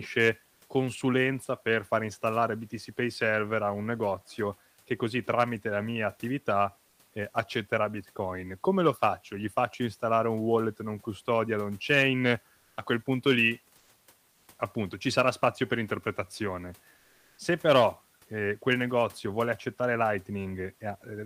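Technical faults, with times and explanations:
0.53–0.61 s, 13.77–13.89 s, 14.31–14.47 s, 16.97–17.37 s: comfort noise in place of the background. The sender likely stopped transmitting in pauses, consistent with Opus discontinuous transmission, so the receiver filled 80–400 ms with synthetic noise. The detailed room background becomes flat, featureless hiss, about 4 dB quieter in the first gap and within about 1 dB elsewhere.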